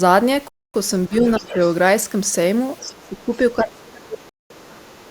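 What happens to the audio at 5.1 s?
Other side's voice leaking through, from 4.99 s to the end of the clip at 5.10 s. A faint second voice sits underneath the main speech, roughly 30 dB below it, so it is a quiet trace rather than a competing talker. The likely cause is that the far end's audio, played on the talker's loudspeaker, was picked up again by the microphone, and the echo canceller left a residue of it in the outgoing signal.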